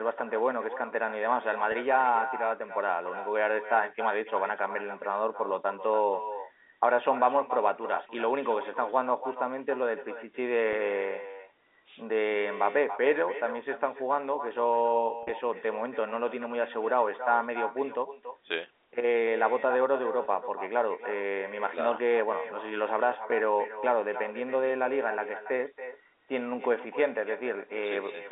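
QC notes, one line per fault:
Throughout, echo with no canceller: the far end's loudspeaker leaks into its microphone and nothing subtracts it, so the sound returns around a third of a second later, about 12 dB down, as a thinner shadow trailing every phrase over the 300 to 3700 Hz telephone band.
1.72–1.74 s, 8.07–8.09 s, 10.73 s, 15.23–15.31 s, 20.25 s, packet loss with pitch repetition: the receiver bridged missing audio by repeating the last pitch period. The 10 and 20 ms gaps, fitting one or two lost packets, give a brief held buzz. At 15.23 s, 60 ms is lost in runs up to 40 ms, so it fades toward silence before cross-fading back.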